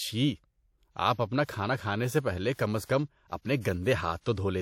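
A speech recording with pre-echo at five points. A short hiss runs ahead of sharp attacks at 1.45 s, after "آپ اپنا", at 2.54 s, before "کم از", and at 2.84 s, 3.60 s and 4.21 s. Each smear lasts 40 to 52 ms. A transform codec spread each block's quantisation noise across the whole block. The noise sized for the loud onset therefore filled the quiet moment before it. The attacks sound softened.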